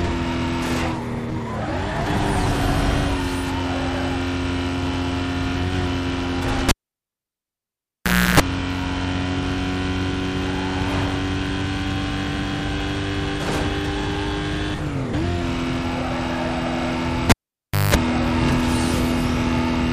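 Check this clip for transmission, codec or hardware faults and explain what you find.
The clip has two hardware faults, both a cable pulled and plugged in. At 6.69 to 8.40 s and again at 17.30 to 17.95 s, a live lead comes out and goes back in. A pop marks the break, the sound drops to near silence for about 1.66 s and then 0.60 s, and the contact re-forming buzzes for 0.32 s at 60 Hz, then 0.19 s at 50 Hz, before a second pop. The waveform shows spikes framing a flat gap; the spectrogram shows vertical lines and stacked mains harmonics.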